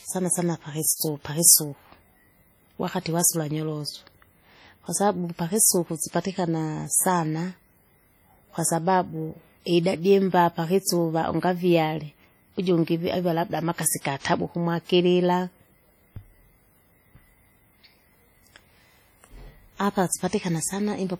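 Speech runs its full length with heavy WMA compression artefacts, likely from a low-bitrate encode around 32 kbps. Transform-block quantisation smears noise over tens of milliseconds, giving a ringing, washy texture and a hiss that pumps with the voice, though content extends to 20.1 kHz.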